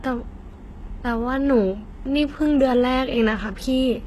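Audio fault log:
throughout HE-AAC compression: plainly gritty, lispy s sounds, likely from treble rebuilt by band replication near 16 kbps; spectrogram shows copied upper bands, nothing above 12.3 kHz.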